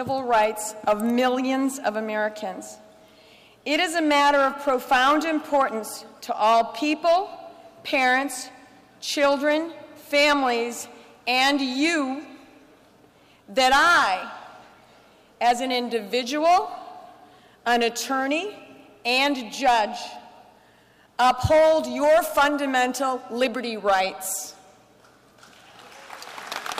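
No technical faults can be heard anywhere in this audio.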